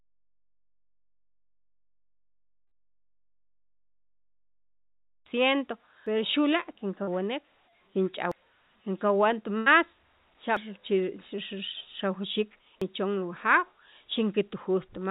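The sound is completely silent from the very start until 5.26 s, with no room tone at all. The silence is already under way when the clip begins and ends abruptly. This is an audio dropout to silence. The input was likely lost for those first five seconds, through a disconnected device, a broken link or a mute, while the recorder kept writing silence. Anything said or played in that stretch is gone.

At 6.07 s the audio skips forward: about a third of a second is missing, and the two sides are butted together with no silence between them. The same jump recurs at 8.32 s, 10.57 s and 12.82 s, 2.25 s apart. That regular spacing points to audio missing between chunks. The recorder or processor most likely works in 2.5-second blocks and drops a short piece each time it closes one and opens the next.

From 7.03 s to 7.09 s there is a brief smear, a momentary wobble where the sound seems to hang on itself. 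This is short concealed packet loss. About 40 ms of the call never reached the decoder in time, and the receiver filled the hole with roughly 42 ms of synthetic continuation, extending the last sound before blending back into the real signal.

At 9.58 s to 9.68 s a longer hold appears. The sound stalls into a sustained tone or hiss that fades before the audio resumes further on. This is a burst of packet loss. About 80 ms went missing in a row, and the receiver kept extending the last sound while turning it down as the gap went on, so the material in between is lost. Across the whole clip the audio is band-limited, with nothing above 4 kHz, which fits G.711 A-law at 64 kbps on the call path.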